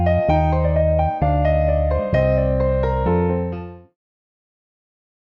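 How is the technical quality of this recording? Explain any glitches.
The signal is technically sound with no glitches to explain, and the only change in level is a smooth, deliberate fade-out that begins around 3 s and completes at 3.97 s without a click or hard edge.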